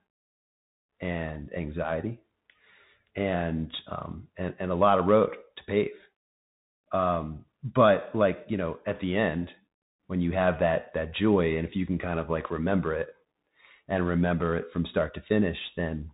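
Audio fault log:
Throughout: Bluetooth CVSD headset codec. The speech is carried as a one-bit up-or-down signal with an adapting step, which fits a 64 kbit/s CVSD stream, and the damage is plainly audible. Nothing passes above 3.8 kHz, so the sound is narrow and boxy. S sounds come out scratchy, loud bright peaks smear where the step can't keep up, and a grainy hiss sits under everything. A spectrogram shows a hard ceiling at 3.8 kHz with a speckled noise floor beneath it.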